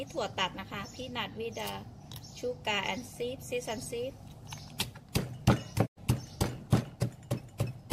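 A digital broadcast dropout occurs from 5.85 to 5.99 s. The receiver stopped getting valid frames, which fits about three lost, and muted. The sound fades out over 20 ms into a hole of roughly 96 ms, then resumes later, with that stretch gone.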